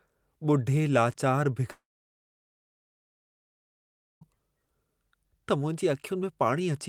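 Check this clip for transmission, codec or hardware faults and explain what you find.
One fault is present: a long network dropout from 1.71 s to 4.28 s. About 2.5 s of the speech never reached the receiver, most likely because packets stopped arriving over the network path. Concealment stretches the last received sound forward as a brief buzz that fades away, leaving about 2.4 s of silence. When audio resumes at 4.28 s, the speech picks up further along, and the missing section is simply gone.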